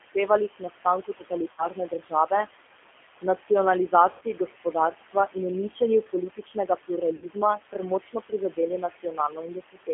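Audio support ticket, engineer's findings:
Noise suppressor artifacts throughout: background pumped down about 16 dB between phrases and swells back under speech. Frame-by-frame band gating in the suppressor, working against room noise sitting about 11 dB below the talker.

G.729 codec throughout: narrow, slightly rough, synthetic speech, nothing below about 250 Hz or above 3.4 kHz. Damage is plainly audible. Fits an 8 kbit/s G.729A leg rebuilding speech from filter, pitch and pulse parameters, so the residual noise warbles too.

Speech cut by the noise suppressor, 0.0 to 2.31 s and 3.21 to 3.5 s: soft consonants and word tails get swallowed, dropping up to about 17 dB in the first stretch and about 12 dB in the second. The first stretch loses well under a second in total, the second only a brief moment. The suppressor mistook low-level speech for noise and gated it with the background.

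VoIP packet loss concealed by the speech codec, at 1.52 to 1.68 s, 4.11 to 4.23 s and 7.16 to 7.26 s: short buzzy, smeared tones fading out, with weak speech just after. The gaps are about 60 ms, 100 ms and 60 ms, which fits runs of lost 20 ms packets. The decoder extrapolates its last pitch and filter with falling gain and needs a few frames to recover.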